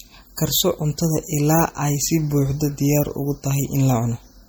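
Throughout the speech the sound is watery and swirly, with dull treble and metallic chirps on s sounds. The likely cause is MP3 compression that is starved of bits, as at around 48 kbps: the encoder cuts off high frequencies and drops weak components that flicker between frames.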